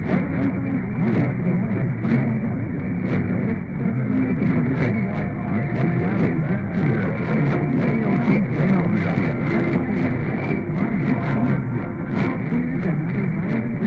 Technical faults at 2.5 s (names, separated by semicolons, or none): none